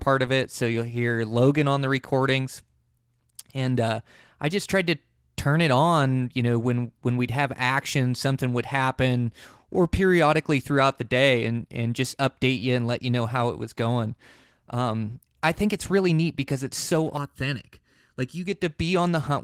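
From 17.17 to 18.46 s, after "neat because it's so", channel delay (comb filtering) hollows the speech with fixed, evenly spaced notches from around 700 Hz, rather than codec-style muffling.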